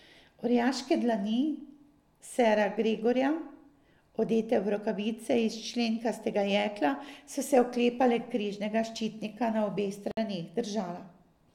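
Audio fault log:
10.11–10.17 s, gap at a join of encoded pieces: a 59 ms gap opens after "križnega ščitnika na obeh". Untrimmed encoder delay and end padding remain, so speech resumes where it stopped.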